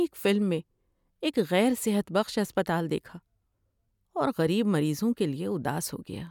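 No technical faults are audible.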